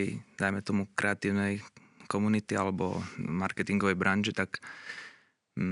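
Nothing technically wrong turns up in this short bit of speech, with just a faint room background sitting about 53 dB below the talking.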